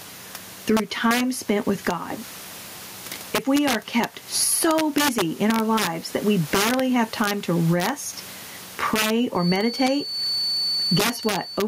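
Integer overflow runs through the whole speech clip. The loudest peaks are driven about 7 dB past full scale. Instead of being limited, those samples wrap to the opposite sign. Under one percent of samples are affected, yet each one snaps out as a violent crack, harsher than clipping.

Gain pumping is also present from start to finish. The swing is around 15 dB. The likely cause is input gain set far too high, with a fast limiter clamping down on every peak. The speech sounds squashed and flat in level.

A feedback whistle appears at 9.33 s and lasts to the end. It is a thin tone at 4.5 kHz, well below the speech in level, swelling and fading slowly. This likely comes from the loudspeaker-to-microphone loop sitting right at the edge of feedback without running away. The room noise stays faint beneath it.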